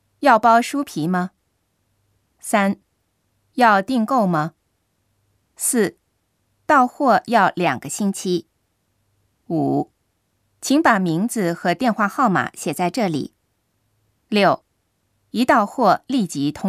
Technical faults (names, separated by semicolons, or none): drift correction step